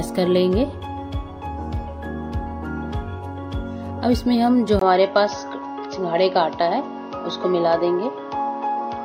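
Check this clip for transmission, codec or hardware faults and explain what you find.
One fault stands out: at 4.79 s the sound abruptly loses its top end and stays that way to the end. After a brief gap of about 20 ms, nothing remains above 6.4 kHz, the tone turns duller and boxier, and fresh background noise appears roughly 40 dB beneath the signal, while loudness barely changes. The likely cause is an input switched to a poorer device, a narrower-band microphone path with its own character and noise. On a spectrogram, energy above 6.4 kHz cuts off cleanly at 4.79 s; the waveform shows a tiny dropout there.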